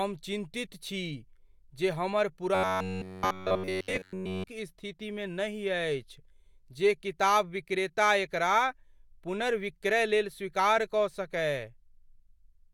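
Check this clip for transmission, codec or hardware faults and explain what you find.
One transmission fault stands out: robotic sound from repeated short buffers, from 2.55 to 4.49 s, between "जे हमर" and "स्थितिमे नहि अछि जे". Throughout that stretch the speech becomes a rigid metallic buzz at about 94 Hz. The likely cause is late-arriving audio being covered by looping roughly 10.7 ms of the last buffer. Unlike a mains hum, the buzz loosely follows the speech's rhythm but never changes pitch.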